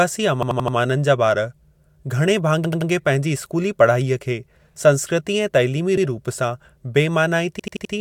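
Four stutters break up the speech, all repeated buffer faults: at 0.43 to 0.77 s, 2.65 to 2.90 s, 5.97 to 6.06 s and 7.60 to 7.94 s. Each time the playback device ran dry and looped its last chunk, about 85 ms long, which fits a 4096-sample buffer. That chunk plays four, three, one and four extra times, with a hard seam at each repeat, so you get a short stutter rather than a gap.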